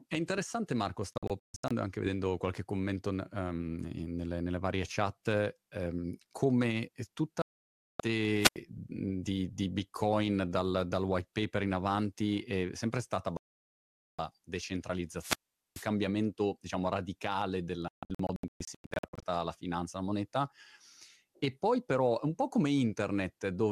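Speech clip, and it's got two kinds of trouble. There are four digital broadcast dropouts, where the receiver mutes whenever frames arrive damaged and whatever was sent in that stretch is simply gone. From 1.13 to 1.71 s and from 17.88 to 19.23 s the sound is chopped into several short holes, none longer than about 0.14 s. The later one follows "diciamo radicale" and clears by "la finanza la moneta". The other two are solid gaps: 7.42 to 8.00 s right after "um come", and 13.37 to 14.19 s after "avanti è sempre stata". The hole sizes fit whole 24 ms frames being thrown out. Then there are two wireless microphone squelch dropouts, which sound different. The analogue radio link fades, hiss swells, and the receiver's squelch shuts the output until the signal comes back. At 8.39 to 8.58 s the actual mute is short, about 0.09 s. At 15.17 to 15.89 s it lasts about 0.43 s.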